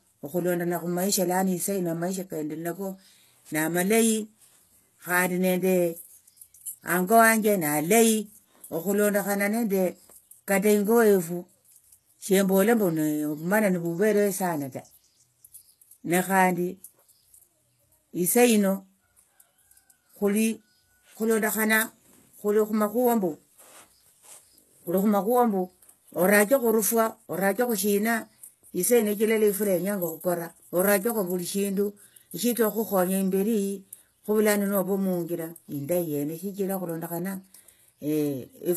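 Speech whose s sounds come out gritty and metallic, with treble that sounds synthetic and stops near 12.3 kHz, likely HE-AAC compression rebuilding the highs from copied lower bands at around 16 kbps.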